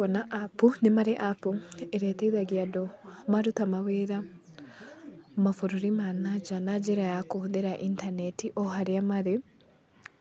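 No technical faults are audible.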